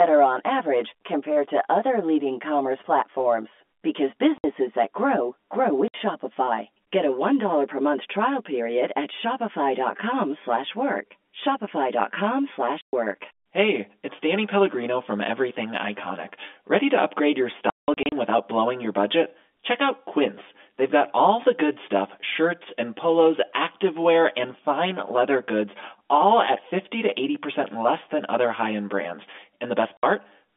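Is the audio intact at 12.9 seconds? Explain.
No. From 12.81 to 12.93 s there is packet loss filled with silence. About 120 ms of the signal is missing and replaced by dead digital quiet with abrupt edges, which fits four lost 30 ms packets. Concealment would instead smear or repeat the preceding sound across the gap. Running through this moment as well is channel delay (comb filtering). One channel lags the other by around 10 ms, and summing them to mono carves notches from roughly 50 Hz upward at even spacing. The result is a steady hollow, phasey colour, unlike the brief hard-edged hole of the lost packets.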